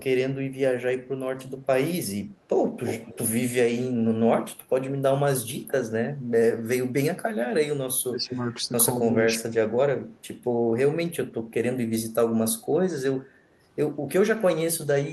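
At 2.85 to 3.18 s an echo leak adds a delayed copy of the speech about 217 ms behind it and roughly 10 dB down. The likely cause is a far-end loudspeaker echo that the canceller failed to remove. Unlike a room reflection, it is a separate repeat. It returns faintly at 8.29 s and is barely audible at 10.13 to 10.25 s.

Speech suppressed in double talk sets in at 8.09 to 8.57 s and again, more deeply, at 9.08 to 9.73 s. The speech dips rather than gaining anything, likely because the canceller could not separate its own talker from the echo and attenuated both.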